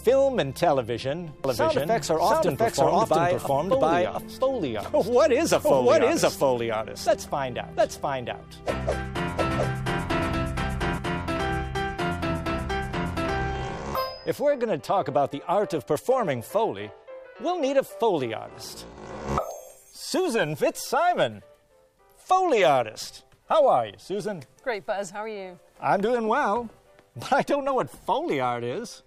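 From 1.44 s to 10.98 s, each sound is repeated by an equally loud, dry copy roughly 0.7 s behind, starting and stopping abruptly. This doubled audio track likely comes from a slower second capture path mixing the same signal in again.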